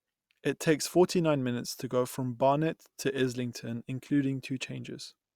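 No technical faults can be heard at any point in the recording, and the signal stays continuous and steady throughout.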